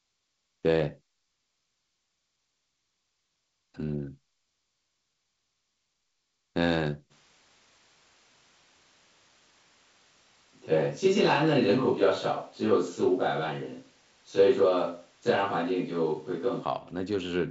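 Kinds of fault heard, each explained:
Switch to a distant microphone, 7.12 to 16.62 s: the speech suddenly turns roomy and hollow, with thinner bass and more of the room around it, then snaps back at the end. The likely cause is that the close microphone's signal dropped out and a microphone further from the talker took over. Loudness stays about the same, but the background noise rises to roughly 35 dB below the speech, heard through wideband telephone coding that reaches about 7.7 kHz.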